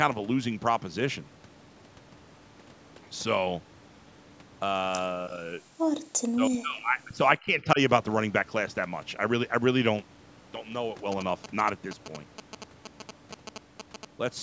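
Speech with three kinds of fault. The talker dips slightly from 5.16 to 5.62 s, drops almost to silence (about 40 dB) from 6.24 to 7.22 s, and sags again by about 15 dB from 7.38 to 7.79 s, likely speech suppressed in double talk as the echo canceller mistook the talker for loudspeaker echo. Between 5.90 and 5.94 s the room sound briefly vanishes by about 38 dB, background gated by the echo canceller while the far end played. From 11.12 to 14.05 s a galloping ticking buzz at 217 Hz, only about 10 dB below the speech, comes from GSM signalling bursts of a nearby 2G phone being rectified in the audio circuit.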